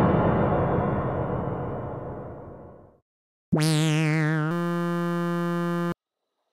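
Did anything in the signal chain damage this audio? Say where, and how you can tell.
Yes. A system hang loop at the driver or buffer stage: from 4.51 to 5.92 s the system froze while the hardware kept replaying one 5.8 ms buffer, which fits a 256-sample buffer. The exact repetition becomes a steady 172 Hz buzz, and about 1.5 s of audio is lost.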